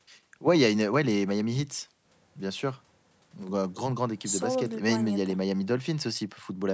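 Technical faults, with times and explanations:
Nothing here sounds wrong; it's just speech through ordinary call microphone processing, with the lowest bass trimmed and nothing above 8 kHz, as you'd expect.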